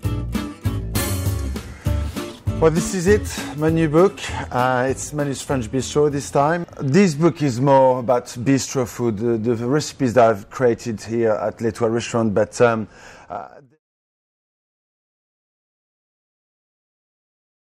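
No faults found; the level eases down smoothly from around 12.5 s to 13.8 s as an intended edit, with no step or click.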